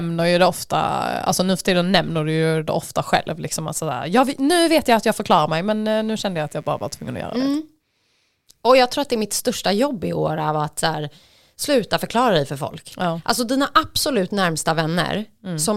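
It's a speech recording with a burst of mains buzz from 5.91 to 7.58 s, right after "jag förklarar mig men". It's a raspy 60 Hz buzz sitting well below the speech, with spiky harmonics, which suggests switching noise from a dimmer, rectifier or unshielded lead getting into the signal path.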